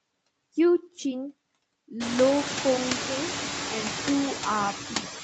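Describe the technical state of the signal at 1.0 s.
At 1.0 s there are noise suppressor artifacts, present throughout. Bands taken for steady noise drop about 10 dB, so the background dips between words and swells under them.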